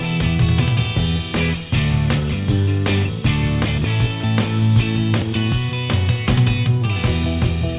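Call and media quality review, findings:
No faults found; call path band-limited to 4 kHz.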